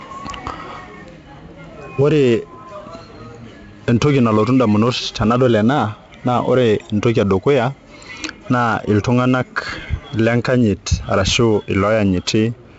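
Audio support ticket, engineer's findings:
4-bit ADPCM compression, throughout: heavy gritty hiss tracking loud speech, harsh onsets, nothing above 7.7 kHz. Coarse adaptive step quantisation; fits a 64 kbps stream at 16 kHz.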